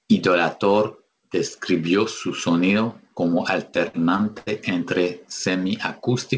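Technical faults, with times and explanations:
3.76–4.49 s, repeated stalls (stutter): Just after "describió su sonido como", the speech catches five times. Packets arrived late, so the jitter buffer kept running dry. The receiver stretched the last sound to bridge each wait, the longest about 82 ms. Nothing is lost, but this stretch drags.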